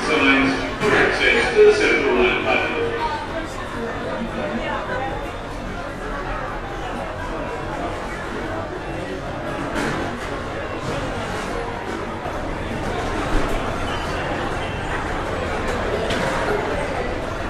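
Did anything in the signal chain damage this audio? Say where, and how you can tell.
Yes. Channel delay (comb filtering) from 0 to 12.25 s: one channel lags by roughly 20 ms before the mono sum, cutting evenly spaced notches from around 20 Hz, so the sound turns rough and slightly doubled.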